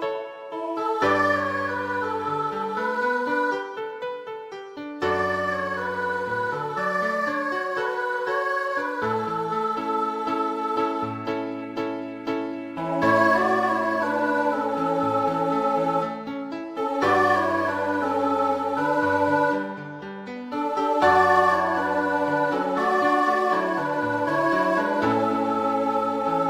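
Nothing in the recording points to a technical fault, with the signal holding steady throughout.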